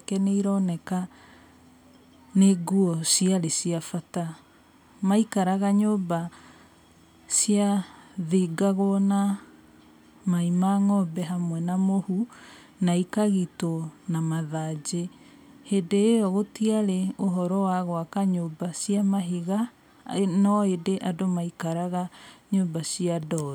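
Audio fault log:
Nothing to log here, since there's nothing wrong to be heard anywhere in this speech recording.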